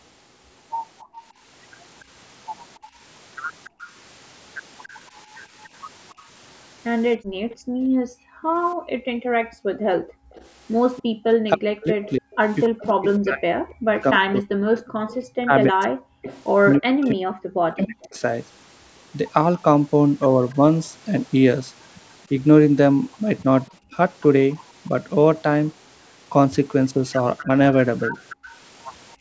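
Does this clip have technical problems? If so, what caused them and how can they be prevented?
Yes, the clip has three kinds of echo-canceller fault.

Background gated by the echo canceller: the room sound drops out at 1.03–1.15 s, again across much of 6.14–10.3 s (about 3 s of it affected), and briefly at 15.06–15.11 s. The first two dips reach about 40 dB and the last about 16 dB. While far-end audio was playing, the canceller's suppressor pulled the microphone path down hard, taking the ambience with it until it released. Prevention: use a gentler residual-echo suppressor or comfort-noise injection so the background stays continuous.

Echo leak: a faint delayed copy of the speech trails it by 284 ms across 1.15–19.62 s, sitting roughly 25 dB below the direct speech. It returns briefly at 24.54–24.65 s (about 35 dB down) and at 28.29–28.57 s (about 20 dB down). The likely cause is a loudspeaker-side canceller that did not fully model the speaker-to-microphone path, so part of what it picked up was sent back. 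Prevention: use a headset, or reduce loudspeaker volume so the canceller's filter can converge.

Speech suppressed in double talk: across 11.0–18.21 s the talker's level dips in pieces, totalling around 4 s, with drops up to roughly 40 dB. Shorter dips occur at 23.92–23.97 s (about 5 dB) and 27.43–28.14 s (about 15 dB over roughly 0.1 s). The likely cause is that both sides spoke at once and the canceller could not separate local speech from echo, so it attenuated both. Prevention: use a canceller with robust double-talk detection, or full-duplex hardware with good acoustic isolation.

The call microphone processing passes nothing above 8 kHz.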